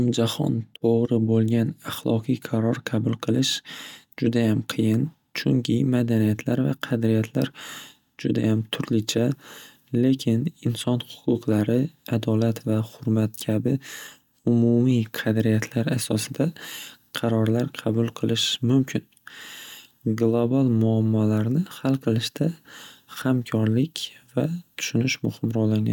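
No technical faults can be heard in this recording.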